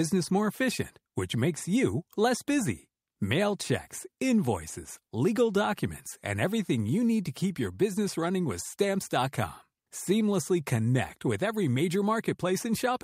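No technical faults can be heard anywhere in this recording.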